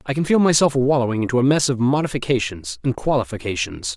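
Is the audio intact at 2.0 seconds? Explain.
Yes, at 2.0 seconds the speech is intact, with no dropout, click, distortion or other fault at that point.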